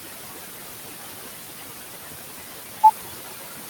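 Noise suppressor artifacts run through the whole speech clip. The room noise sits only about 12 dB below the voice, and the suppressor pulls it down by about 17 dB in the gaps, then lets it return beneath each phrase, so the background pumps. A spectrogram shows the noise floor blinking in and out with speech.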